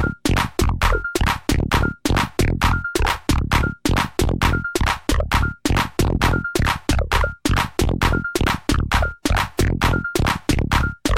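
At 6.15 s a voltage spike, likely from a switch or static, adds a loud pop: two thumps ending by 6.24 s, around 5 dB above the sound.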